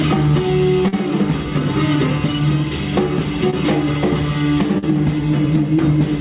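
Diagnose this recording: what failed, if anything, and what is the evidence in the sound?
The network stage failed, with short concealed packet loss in three places. Gaps of about 40 ms at 0.88 to 0.94 s, 20 ms at 3.50 to 3.54 s, and 40 ms at 4.78 to 4.84 s each come across as a brief smear or wobble. Those packets never reached the decoder in time. The receiver extended the preceding sound to cover each hole, then blended back into real audio. The band stops at 4 kHz, which fits a G.711 call codec.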